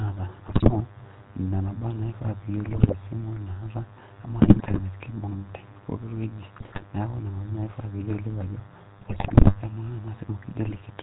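A thin, steady buzz sits under the speech for the whole clip, pitched at 100 Hz and rich in harmonics, about 25 dB below the speech. This is DECT cordless phone buzz. A DECT handset or base station nearby transmits a short radio burst every 10 ms. The audio circuitry rectifies that radio energy, so each burst turns into a small audible pulse, and together they form the 100 Hz drone.

Running alongside it from start to finish, the speech has a gravelly, buzzy roughness, and nothing above 4 kHz gets through. The sound is dull and rasping at once, which fits the GSM full-rate codec at 13 kbps. That codec rebuilds speech from a vocal-tract filter driven by a regularly spaced pulse train, and it keeps only every third excitation sample. The coarse excitation gives the grainy texture, and the band limit removes the top end.

On top of this come six bursts of squawks, pops and gargling, at 0.46 to 0.80 s, 2.65 to 2.94 s, 4.39 to 4.81 s, 6.60 to 6.81 s, 8.98 to 9.60 s and 10.66 to 10.82 s. 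These are GSM bit errors. Corrupted bits reached the decoder, so the filter, pitch and gain values it received were wrong for each affected frame. That bends the spectrum into strange shapes or makes the level jump, and the disturbance in each burst points to an error rate of a few percent.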